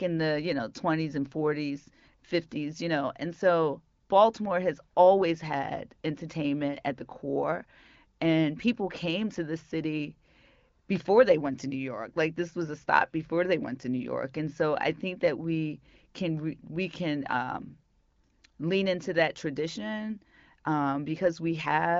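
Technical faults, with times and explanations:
Nothing here counts as a technical fault; the speech comes over the AMR wideband (HD Voice) codec, at a rate where it stays clear, with the usual top end stopping around 7.5 kHz.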